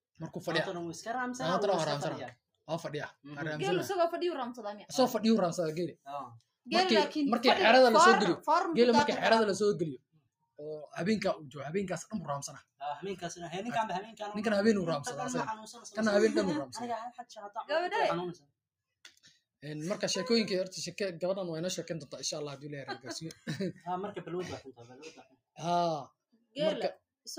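A noise suppressor applied to music or sounds stays active throughout. It treats steady parts as noise, so the level pumps by a few decibels and held tones thin out.

The noise suppressor cuts sound at 10.0–12.8 s, 14.1–14.2 s, 15.6–15.9 s, 17.1–17.6 s, 18.3–18.5 s, 23.3–23.9 s and 24.7–27.3 s. Sustained parts and tails drop by up to about 21 dB.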